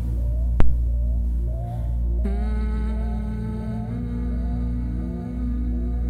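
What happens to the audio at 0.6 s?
A phantom power thump hits from 0.60 to 0.77 s. A supply switching on a live input pushes a step through the coupling capacitors. The result is a deep thump peaking near -3 dBFS and dying away over about 38 ms.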